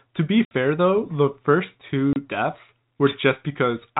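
At 0.45 s the speech drops out for 60 ms, and again at 2.13 s for 30 ms. This is packet loss filled with silence: the receiver had nothing to play and inserted zeros. The gap lengths suggest two lost 30 ms packets, then one. The waveform falls flat to silence with vertical cut-offs, and the spectrogram shows blank columns crossing the whole telephone band up to 4 kHz.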